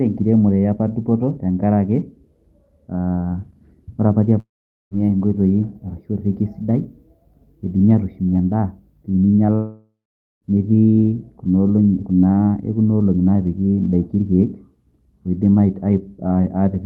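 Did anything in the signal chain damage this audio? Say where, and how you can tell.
Yes, a long network dropout on the call path, at 4.39–4.94 s and 9.55–10.45 s, likely packet loss. Each gap opens with a fading buzz extending the last sound, then near-silence for about 0.45 s and 0.48 s, unlike a mute's instant cut. Resumed audio skips about 0.52 s and 0.88 s.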